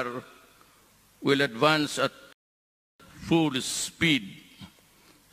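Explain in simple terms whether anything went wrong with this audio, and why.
A rebuffering stall interrupts the sound at 2.33 s: it drops to silence until 3.00 s, then picks up exactly where it stopped. The player ran out of downloaded audio and waited for more, so nothing is missing, but about 0.67 seconds of dead air is added.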